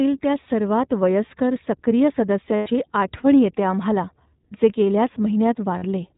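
The whole clip of speech has passed through the iLBC codec, and the result points to its 20 ms frame mode, the one near 15.2 kbps. Each frame's excitation is coded on its own, and the band stops at 4 kHz, so the voice sounds narrow and muffled at the top. A plainly audible rough, slightly synthetic edge sits on every syllable.

Lost iLBC frames then break the signal three times. From 0.42 to 0.47 s, just before "वयस्कर सक्रिय", about 40 ms went missing, which fits two dropped frames. The decoder filled the hole by repeating the last pitch cycle with added noise, heard as a brief held, buzzy vowel. After "वयस्कर सक्रिय", from 2.56 to 2.69 s, a longer gap of about 100 ms, likely five frames, stretches that buzzy hold and lets it fade before speech resumes. At 5.78 to 5.82 s, another 40 ms loss gives a short smeared vowel. Because the frames stand alone, the voice snaps back cleanly right after each gap.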